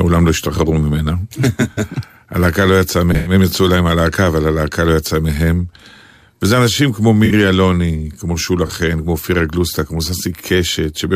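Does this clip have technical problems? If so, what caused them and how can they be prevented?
Yes. A corrupt frame concealed at 1.72–1.79 s, 3.12–3.32 s, 7.25–7.32 s and 8.67–8.71 s: the decoder detected damaged AAC frames and covered them. Protecting the bitstream with error checking, retransmission or reliable storage prevents this.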